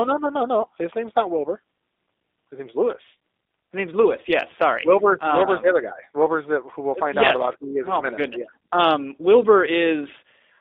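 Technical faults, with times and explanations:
Throughout, G.729 codec: the speech passes through a model-based coder, consistent with 8 kbit/s, that rebuilds each frame from a vocal tract filter, pitch predictor and sparse pulses. It sounds plainly rough and synthetic, with nothing outside roughly 250 Hz to 3.7 kHz.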